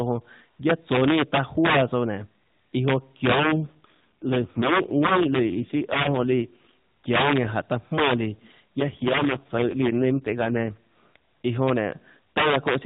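Speech over a narrowband mobile path: the AMR-NB codec leaves nothing above 4 kHz, with a hard ceiling on a spectrogram. Integer overflow runs throughout. The signal is pushed about 10 dB too hot, and a small share of samples, around 2 percent, wrap past the integer limit to the opposite sign. Loud peaks become violent cracks harsher than clipping, seen on the waveform as sudden vertical jumps to the opposite sign. An AMR rate drop occurs from 3.40 to 6.69 s and again from 8.78 to 10.74 s, which fits a switch from the 12.2 kbps mode down to 4.75 kbps on a weak link. The voice turns buzzier and more synthetic without any gap or band change, and the spectrogram shows smeared, less detailed harmonics in those stretches.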